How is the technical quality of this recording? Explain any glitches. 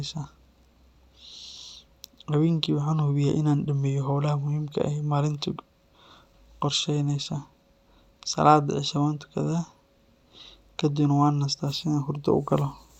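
The technical quality is good, with no glitches to explain.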